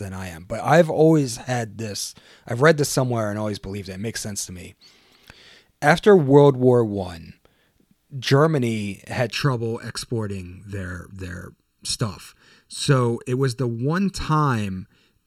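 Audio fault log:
9.32 to 15.27 s, channel delay (comb filtering): one channel lags the other by roughly 0.7 ms, and the mono sum cancels shared content at evenly spaced frequencies, with the first notch near 700 Hz and more at odd multiples above. This leaves the speech hollow and phasey.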